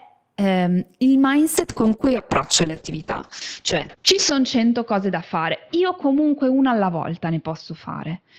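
From 1.58 s, just after "ehm il", a call bitrate drop sets in: the bandwidth estimate collapses and the encoder is pushed onto a far smaller bit budget, which fits a fall from about 32 kbps to roughly 6 kbps. The speech turns coarse and watery, and the top end narrows from 20 kHz to 8 kHz, so it sounds muffled. The worst stretch lasts about 2.75 s, and quality never recovers before the clip ends.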